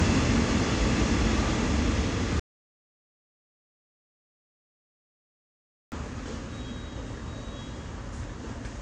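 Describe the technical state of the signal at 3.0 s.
At 3.0 s the signal is in an audio dropout to silence that runs from 2.40 s to 5.92 s. The input most likely stopped reaching the recorder, through a lost connection or an unintended mute, while the recorder kept writing silence. The sound cuts off abruptly and leaves silence, with no room tone or background underneath. About 3.5 s of the original audio is simply gone.

AAC compression is present across the whole clip, including the audio on either side of this gap. The encoder likely ran at a low bitrate, which fits AAC-LC at around 32 kbps, and discarded detail its hearing model judged expendable. It removed everything above about 9.8 kHz. The sound before and after the dropout is audibly dull and smeared, with a fizzy, warbling texture on sustained and noisy parts.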